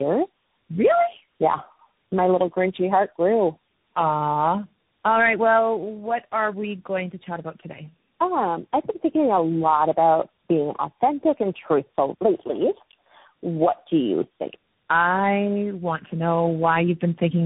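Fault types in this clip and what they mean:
Tandem speech coding: the speech passed through three speech codecs in a row, each re-coding the last one's losses, leaving it rough, warbly, muffled, with nothing above 3.8 kHz.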